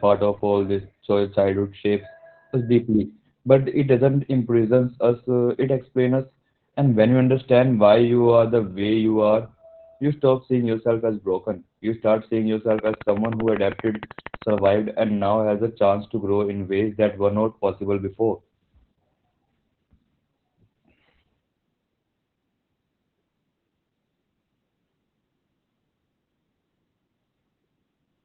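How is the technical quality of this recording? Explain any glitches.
The quality is poor. Heavy voice compression runs throughout, and a burst of clicks interrupts the middle.

Opus voice compression affects the whole clip. The speech is muffled and hoarse, with nothing above 4.5 kHz. That narrowband, coarse SILK coding fits a bitrate near 8 kbps.

A train of clicks runs from 12.71 to 14.67 s, between "start seeing" and "and now has a". Around thirty regular ticks arrive at 12.8 per second. They stand out well above the speech. The likely cause is electrical interference or a struggling interface.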